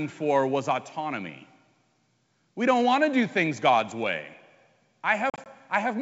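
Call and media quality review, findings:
Packet loss on an ADPCM call, 5.30 to 5.47 s: hard-edged silent holes totalling 80 ms over 160 ms, longest 40 ms, a handful of packets. Decoder predictor and step size desync, so audio resumes slightly distorted, settling within tens of milliseconds. Unlike a plain dropout, the damage continues after the gap. G.722 at 64 kbit/s on the same path adds at most faint coding hiss.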